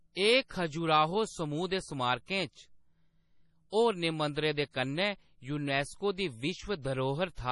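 Speech runs through the whole clip with a hard ceiling at 11.3 kHz, nothing above it, and a watery, swirling texture as faint spectral detail flickers in and out from frame to frame, with metallic chirps on s sounds and smeared attacks. The likely cause is heavy MP3 compression, consistent with a bitrate around 32 kbps. Unlike a simple low-pass filter, which would only dull the top end, the swirl and chirping reveal a starved perceptual codec.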